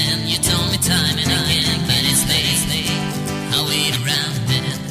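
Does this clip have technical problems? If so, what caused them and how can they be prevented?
Yes. A doubled audio track runs from 1.30 s to 3.96 s: a second full-band copy of the sound trails the original by roughly 400 ms, about 5 dB quieter. It carries no decay or room colour, so it is not an echo, and it appears and vanishes abruptly at those times. The likely cause is the same signal reaching the mix twice, once directly and once through a slower capture path or a misaligned edit. To prevent it, route each source through only one path and check edits for overlapping duplicate regions.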